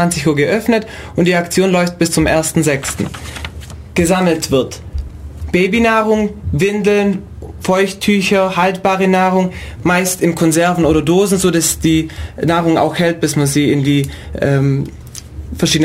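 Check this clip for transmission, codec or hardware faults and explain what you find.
Nothing in this one stands out as a transmission, codec or hardware problem, so there's nothing to flag.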